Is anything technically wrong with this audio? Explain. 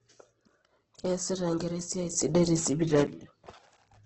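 Yes. Throughout the speech, the sound is grainy, rough and noisy rather than clean, and nothing is present above 8.2 kHz. This is likely heavy Opus compression in its CELT music mode at a low rate, consistent with roughly 12 kbps, where starved bands are refilled with folded or noise-like content.

At 2.14 s, the speech and the background noise jump up together by about 7 dB, hold there, then drop back at 3.07 s. This sudden gain jump likely comes from a digital gain change applied instantly, with no ramp.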